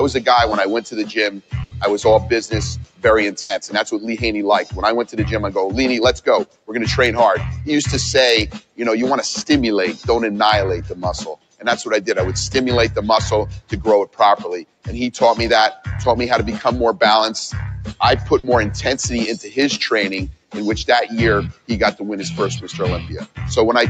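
What you've got here is a sound recording run through a call, with a speech-tuned noise suppressor left on the whole way. That's the main problem. The suppressor keeps mistaking sustained parts and tails for background noise, so the level swings by around 10 dB as it clamps and releases. Onsets punch through while anything held or decaying sinks, and the whole thing pumps and thins out.

On top of that general pumping there are three stretches where it bites harder and turns the sound down further: 0.85 to 6.7 s, 8.54 to 15.86 s and 19.48 to 23.39 s. In each, the deepest dips reach about 18 dB. The steady or fading bits get pulled down or have their decay chopped short, adding up to about a second in the first stretch, roughly 1.5 s in the second and under a second in the last.

Then there are two bursts of packet loss, at 1.63 to 1.73 s and 3.41 to 3.51 s, each about 100 ms. In both, the receiver stretches the last bit of audio for 80 ms, fading it as it goes, so you hear a held buzz or a dying hiss. 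When it picks back up, 80 ms of the actual audio has simply been skipped.

Last, there's a short concealed packet loss at 18.39 to 18.45 s. It's about 60 ms, with 40 ms patched over by extrapolating what came before. It comes across as a quick smear or wobble rather than a dropout.

The top end stopping near 8 kHz is just the Opus call bandwidth and isn't part of the problem.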